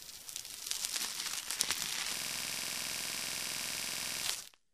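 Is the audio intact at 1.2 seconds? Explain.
Yes, the audio is intact at 1.2 seconds, with no audible fault at that moment.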